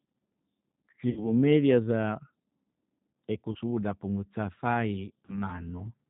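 Throughout, the speech carries plainly audible G.729 codec damage at 8 kbit/s, consistent with the G.729A variant. The codec rebuilds each frame from a vocal tract filter, pitch predictor and sparse pulses, so the sound is rough and synthetic. A spectrogram shows an empty band above 4 kHz.

VoIP packet loss concealed by the speech codec appears at 1.10–1.28 s (about 60 ms lost, fitting two packets), 3.52–3.57 s and 5.25–5.42 s (about 30 ms each, fitting one packet). The decoder stretches its last pitch and filter into a fading buzzy tone or coloured noise, and the damage continues past each gap. On a spectrogram, the concealed sound darkens gradually, and the waveform shows a decaying envelope.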